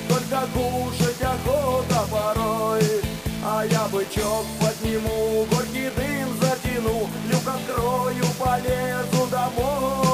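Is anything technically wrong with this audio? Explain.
Yes. Throughout the clip the sound carries a coarse, grainy distortion that shifts with the signal, with the error sitting only about 15 dB below it. Quiet passages turn gritty and sputter. The likely cause is low bit depth without dither: samples rounded to just 5 bits, so the error tracks the signal.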